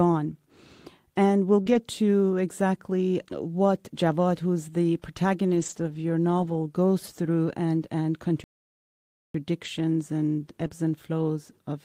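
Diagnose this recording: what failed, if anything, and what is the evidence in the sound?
Short concealed packet loss on the network side: brief smears at 1.61–1.68 s and 10.68–10.72 s, just before "and flows". The decoder extended the last sound over roughly 40 ms and 20 ms gaps.

Lost packets rebuilt from error correction at 1.66–1.76 s, 5.50–5.96 s and 10.60–10.66 s. Those stretches turn rougher and noisier because the codec played low-bitrate backup copies, with 240 ms rebuilt in the middle one.

A playback stall after "goes through and and": the sound cuts to silence for about 0.9 s, 8.44–9.34 s, then carries on. That's likely the player's buffer running dry.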